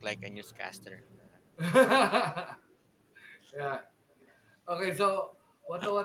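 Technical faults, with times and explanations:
2.63–2.80 s and 3.51–3.62 s: speech suppressed in double talk. The voice dips by roughly 10 dB in the first stretch and about 15 dB in the second. It stays the same voice, just pulled down, with no delayed copy. This likely comes from an echo canceller ducking everything while both sides spoke at once.
4.10–4.32 s and 5.32–5.37 s: echo leak. A faint repeat of the voice arrives 409 ms late, at about -35 dB and then about -40 dB. It is an added delayed copy, not a loss of level, likely loudspeaker pickup that the far end's canceller failed to remove.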